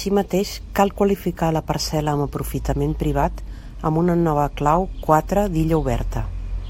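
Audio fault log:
No faults found in the speech recording; nothing to log.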